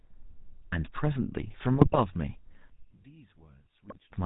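A GSM full-rate codec at 13 kbps shapes the whole recording. The vocal tract is modelled and excited by sparse, regularly spaced pulses, and nothing above 4 kHz survives. The speech is dull at the top and plainly buzzy and gravelly throughout.

From 1.74 to 2.01 s, GSM bit errors reach the decoder, corrupting filter, pitch and gain values frame by frame. The spectrum bends and the level jerks, so the speech breaks into squawks, pops and gargling. A shorter, denser burst returns from 3.88 to 3.98 s.

From 2.70 to 4.12 s, the likely cause is one channel inverted in polarity, so the centred voice cancels when the channels are summed to mono. The speech falls by about 26 dB to a faint residue of only their difference.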